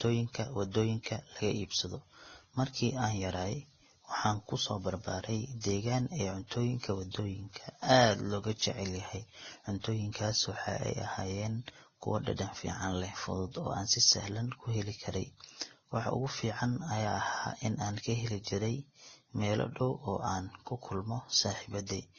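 Speech throughout, and it sounds like transcoding between lossy codecs: nothing above about 6.9 kHz, with smeared, warbly artefacts stacked on a second codec's grain. That likely comes from a low-rate Vorbis pass near 18 kbit/s re-encoded to Opus at 32 kbit/s.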